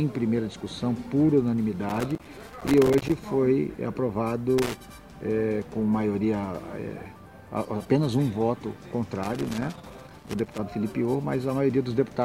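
Loose connector crackle breaks out three times: from 1.89 to 3.12 s, briefly from 4.58 to 4.75 s, and again from 9.23 to 10.59 s. A worn or dirty contact is making and losing connection as it shifts, chopping the audio into an irregular scratchy burst. On the waveform each burst shows as ragged dropouts and sharp spikes. The spectrogram shows scattered vertical broadband streaks across the whole frequency range.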